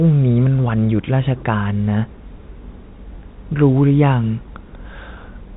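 No technical faults are audible.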